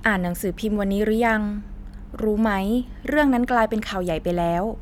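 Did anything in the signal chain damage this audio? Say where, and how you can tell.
No, nothing in the signal chain has audibly damaged this speech recording at any stage.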